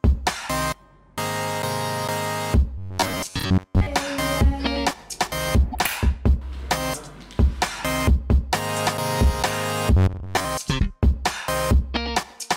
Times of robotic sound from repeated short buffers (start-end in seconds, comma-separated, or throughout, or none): 2.78-3.86, 9.97-10.45